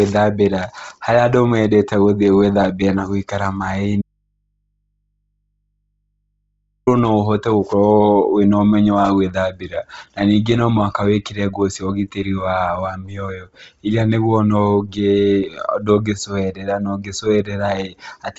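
From the start, the speech has a breathy, grainy edge, and nothing sits above 7.8 kHz. This is heavy Bluetooth LC3 compression, likely at a low bitrate near 24 kbps with short 7.5 ms frames. The codec discards much of the upper spectrum and patches it with shaped noise. A spectrogram shows a hard ceiling at 7.8 kHz, with mottled, noise-like texture below it instead of clean harmonic detail.

At 4.02 s, just after "gũthĩ gwĩthambĩra na gũikara", the speech cuts off abruptly in an audio dropout to a faint residue that lasts 2.85 s. The break is likely a lost signal feed while the downstream path stayed live, so the gap holds only low mains hum, roughly 55 dB below the speech. The waveform collapses to a near-flat line, and the spectrogram keeps only thin low-frequency hum lines until the speech returns at 6.87 s with "no ũhote".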